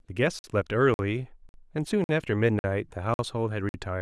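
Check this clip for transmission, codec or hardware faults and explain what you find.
The speech is interrupted by a gap between chunks, seven times: at 0.39, 0.94, 1.49, 2.04, 2.59, 3.14 and 3.69 s. Each hole is 50 ms of silence after every half-second of audio, so nothing is lost, but the playback stalls at each join.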